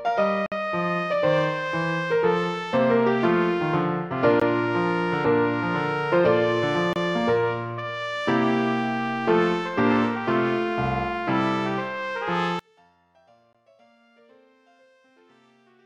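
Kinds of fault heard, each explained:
Bluetooth stall: The sound drops out to dead silence for a moment and then carries straight on. There are four of these gaps: 56 ms from 0.46 to 0.52 s, 17 ms at 4.40 s, 27 ms from 6.93 to 6.96 s, and 16 ms at 13.53 s. The likely cause is radio interference holding up packets, so the headphone buffer empties and playback waits for the retransmissions.
One channel inverted: From 12.59 s to the end, the level collapses by about 36 dB, and almost all of the sound disappears at once. What is left is a faint residue. That pattern likely comes from one stereo channel having flipped polarity, so the content common to left and right cancels when the two are summed to mono. Only the small differences between the channels survive the mix.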